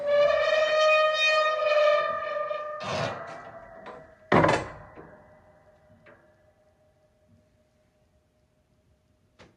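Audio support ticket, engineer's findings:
Listened through the full clip; nothing stood out that would warrant a finding.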